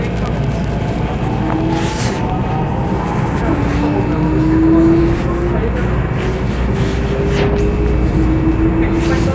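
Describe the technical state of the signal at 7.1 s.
At 7.1 s the signal is intact, with no dropout, clipping, distortion or other technical fault audible at that moment.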